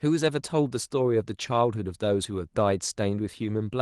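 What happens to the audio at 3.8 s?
At 3.8 s the audio is intact, with no fault to be heard at that moment.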